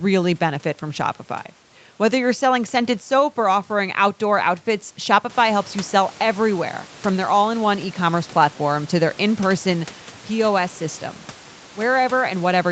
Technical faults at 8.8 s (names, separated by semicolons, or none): none